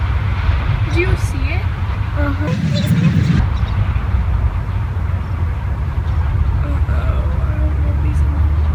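From 2.47 to 3.40 s, a section at the wrong speed plays 1.68x fast, likely from a clock mismatch. It sounds hurried, about ten semitones higher, with harmonics jumping upward on a spectrogram.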